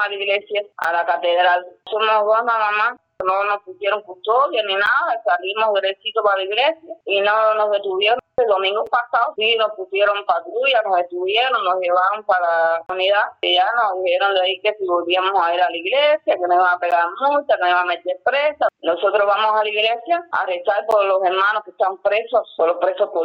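Gaps between stream segments cut the sound at 0.84, 4.86, 8.87, 12.86 to 12.89, 16.91 and 20.91 s, roughly every 4 s. Each segment boundary leaves a timing gap padded with silence, giving hard-edged dropouts of about 6 to 26 ms.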